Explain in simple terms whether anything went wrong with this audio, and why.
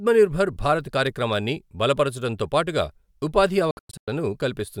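Between 3.71 and 4.08 s the speech cuts into brief silent gaps, longest about 0.1 s, likely a Bluetooth dropout. Unlike a pause, it resumes further along.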